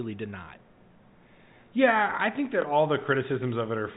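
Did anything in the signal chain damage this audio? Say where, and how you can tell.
Yes, at the network stage, as packet loss with the last packet repeated. Between "I think that" and "all the", from 2.62 to 2.64 s, one 20 ms stretch of speech is replayed instead of new audio, leaving a small blip. Unlike a dropout, nothing goes silent, and it is a single packet, not a buzzing run. The G.711 telephone band, cut off at 4 kHz, can be heard throughout.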